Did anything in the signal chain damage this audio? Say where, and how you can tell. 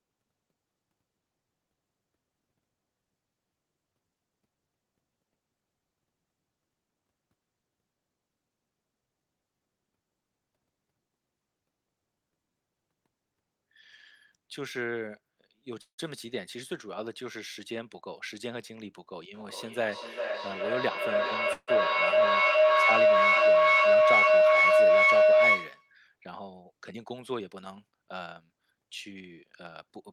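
Yes. Call audio freeze, at the network and jitter buffer: packets were likely held up, and the sound stretches into a fading buzz or hiss then silence at 15.81–16.00 s and 21.53–21.70 s.

Jitter buffer speed-up: the buffer held more audio than it aims for, so the receiver trimmed pitch periods to cut the delay. The sound runs 108% fast at 18.47–19.17 s and 112% fast at 26.93–28.41 s.

Feedback howl, an acoustic loop between two devices in one room: a tone near 700 Hz builds to about 14 dB above the speech. The loop repeats roughly every 0.4 s, from 19.34 to 26.01 s.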